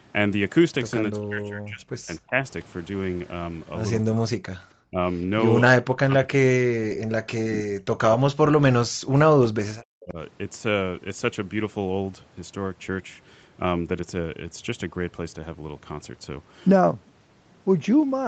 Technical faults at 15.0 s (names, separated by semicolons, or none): none